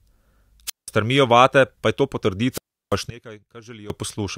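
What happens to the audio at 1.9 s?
Nothing goes wrong at 1.9 s; the speech runs through that moment intact, with no dropout, click or other fault.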